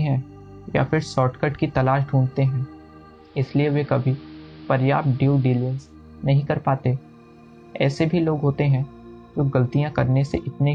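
From 3.10 to 5.99 s the audio shows digital radio blending to analogue: a 423 ms crossfade into the AM broadcast, bringing hiss about 30 dB down, then back. Unlike a simple filter, the level stays matched and the hiss marks the other chain.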